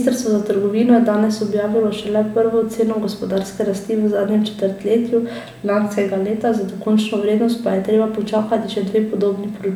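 No technical faults are audible anywhere in the recording.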